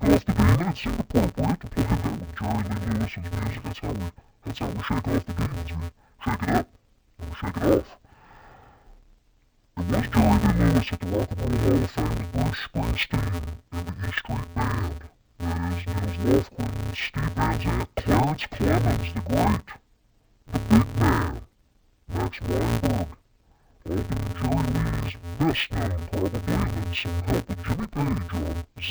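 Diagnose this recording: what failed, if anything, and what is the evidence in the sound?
The failure sits in sample-format conversion: interleaved audio read as planar, present throughout the speech. Each block of alternating left and right samples was split into halves and played as two channels. With blocks this short, about 5.8 ms, which fits a 256-sample block, the sound turns dull and robotic with a steady buzz at 172 Hz and no clear octave drop. A spectrogram shows a line at 172 Hz with harmonics, and the waveform has steps every 5.8 ms.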